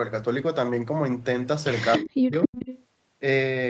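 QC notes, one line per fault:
1.92–2.04 s and 2.46–2.84 s, echo leak: a delayed second copy of the speech trails the talker by about 0.28 s. In the first, brief scrap it sits only a little below the direct sound, and in the longer second stretch it is well down but still audible. The likely cause is a far end on a loudspeaker whose echo canceller left part of its microphone pickup in place and sent it back down the line.
1.98–2.58 s, speech suppressed in double talk: during the overlap the talker's level falls sharply, by around 40 dB at its deepest, and over about half a second the speech thins and drops out in pieces instead of staying steady. This likely comes from the echo canceller failing to tell the talker apart from the returning echo while both were active, so it attenuated everything, including the wanted speech.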